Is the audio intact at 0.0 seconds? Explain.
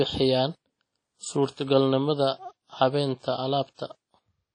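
No, WMA compression damage is present at 0.0 s and runs through the whole speech clip. A transform codec, likely WMA at a low rate fitting about 32 kbps, smears quantisation noise across long blocks and removes everything above 10.1 kHz, giving a ringing, washy sound with breathing hiss.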